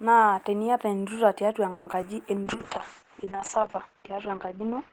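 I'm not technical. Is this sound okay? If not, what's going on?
No. From 1.71 to 1.88 s there is a call audio freeze: the sound stretches into a fading buzz, likely from delayed network data, then resumes without losing anything.

At 1.92 and 2.01 s, short concealed packet loss: tiny pieces of audio went missing, and the gaps were patched over, leaving brief smears.

From 2.45 s to the end, a call bitrate drop makes the speech rougher and muffled, with its crisp top end cut away.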